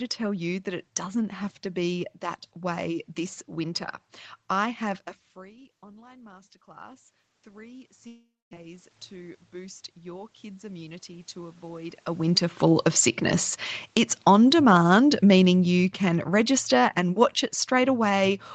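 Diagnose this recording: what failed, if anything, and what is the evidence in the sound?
Automatic gain rising in the call processing: after "I have a", from 5.36 to 12.06 s, voice and room noise swell together by about 15 dB. A talker moving closer would not lift the noise too.

Long network dropout, likely a network stall: at 8.07 s the sound smears into a fading buzz, then about 240 ms of silence. It resumes at 8.55 s with roughly 400 ms lost, not just muted.

Automatic gain falling: from 12.18 to 18.41 s, voice and background sink together by about 10 dB. Both fall evenly, so this is a gain ramp rather than the talker leaning back.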